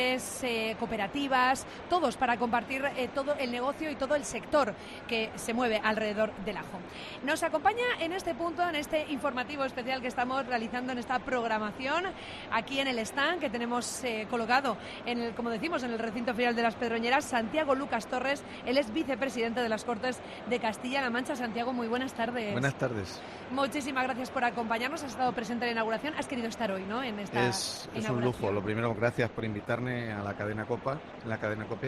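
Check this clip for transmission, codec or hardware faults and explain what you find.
One fault is present, near the end of the clip. From 27.75 s to the end, the adaptive stream drops to a lower bitrate. The connection slowed, so the player switched to a cheaper encoding of the same audio. The change is sudden, with no gap. Codec artefacts become more audible. The drop points to a move from a moderate Opus rate to a very low one, roughly a quarter of it.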